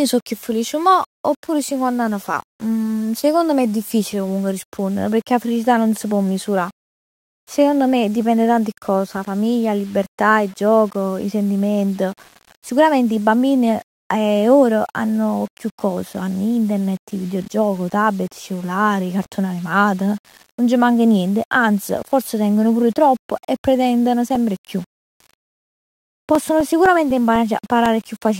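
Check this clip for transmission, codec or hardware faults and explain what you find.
Two faults are present: a grainy low-level distortion throughout, and a run of regular ticks near the end.

Low bit depth without dither affects the whole clip. The speech carries a gritty, signal-following roughness, about 30 dB below the level, and quiet tails drop to silence or sputter. The likely cause is rounding to roughly 7 bits with no dither. Waveforms show visible staircase steps, and spectrograms show distortion tracking each syllable.

Periodic USB or driver dropouts run from 24.35 s to 28.11 s, just after "tropp e pretendono". Every 0.25 s a 2 ms slice of audio is replaced by silence, giving around fifteen evenly spaced ticks. The waveform shows short flat gaps, and the spectrogram shows regularly spaced thin vertical broadband lines.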